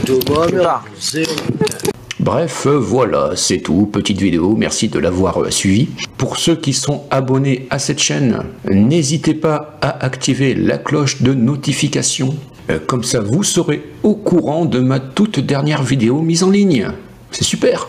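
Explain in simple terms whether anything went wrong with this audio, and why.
Something did go wrong, and it runs through the whole clip: gain pumping. Each time a loud sound arrives, the overall level is pulled down sharply. The swing is large, and loud and soft moments end up squashed toward the same level. The likely cause is the input gain being set far too high, with a fast limiter or compressor clamping down on every peak.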